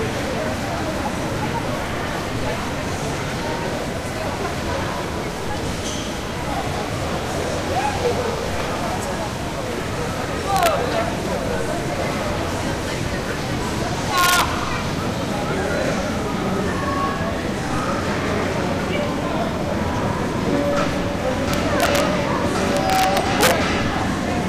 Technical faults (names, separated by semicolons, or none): integer overflow